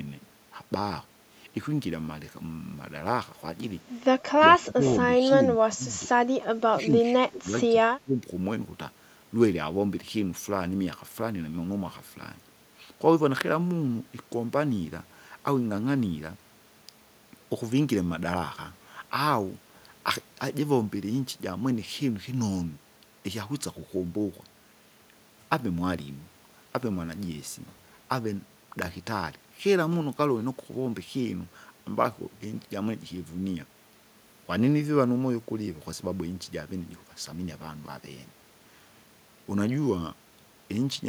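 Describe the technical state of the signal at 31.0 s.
At 31.0 s the speech signal is intact, with no fault to be heard at that moment.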